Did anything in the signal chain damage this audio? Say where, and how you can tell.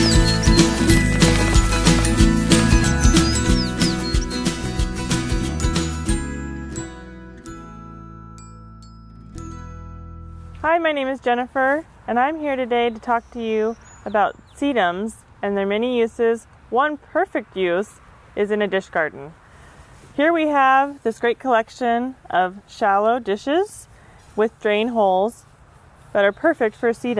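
No, no signal-chain faults found.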